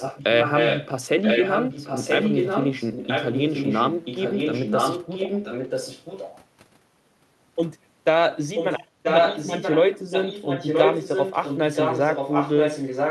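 Speech carries a second copy of itself arriving about 0.98 s late, ranging from about 5 dB quieter than the talker to about 5 dB louder, at 0–0.89, 1.22–6.39, 8.55–8.86, 9.03–9.78 and 10.1–13.1 s: an echo leak, likely from a loudspeaker whose echo canceller let the return through.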